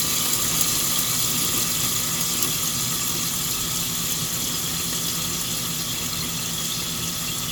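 No technical faults can be heard anywhere in this recording.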